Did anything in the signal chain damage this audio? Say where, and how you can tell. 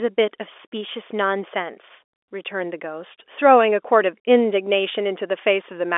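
No, nothing in the chain damaged this speech; it is ordinary G.711 telephone coding at 64 kbps, with the line band running from about 300 Hz to 3.5 kHz as a phone call should.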